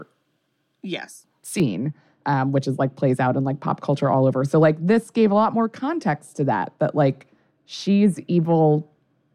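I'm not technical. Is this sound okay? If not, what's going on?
No. From about 1.6 s to the end, the speech turns dull and muffled. That's de-emphasis applied wrongly: a treble-cutting filter, meant only to undo a matching boost made earlier, was used on audio that never had that boost, or was used twice, so crispness is lost.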